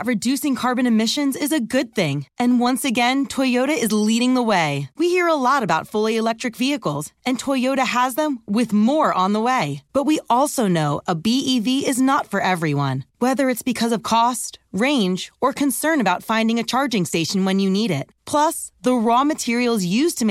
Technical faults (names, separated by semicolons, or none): none